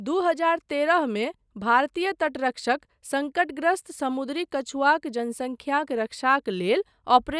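Nothing goes wrong anywhere in this bit of speech, so there's no technical fault to point to.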